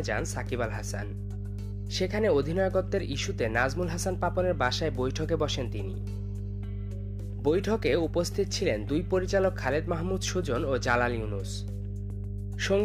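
From start to finish, mains hum sits under the audio as a steady low tone at 50 Hz, loud enough to rival the sound itself. Power-line current has leaked into the signal path, most plausibly through a ground loop or a transformer close to the cabling. Unlike rumble from handling or wind, it holds one fixed pitch and never swells or fades with the material, which marks it as electrical rather than acoustic.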